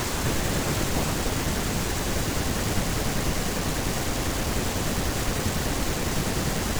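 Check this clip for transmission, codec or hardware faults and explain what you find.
No transmission, codec or hardware faults are audible here.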